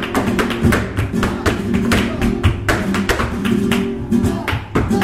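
No technical faults can be heard anywhere in the recording, which keeps a steady, unbroken signal throughout.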